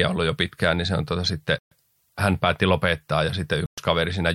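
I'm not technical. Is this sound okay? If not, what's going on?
No. The speech cuts to complete silence twice, from 1.59 to 1.71 s and from 3.66 to 3.78 s, each gap about an eighth of a second. This is likely a Bluetooth stall: wireless interference delayed the audio, so the headphones briefly ran out and paused. These are clean silent gaps rather than crackles or stutters.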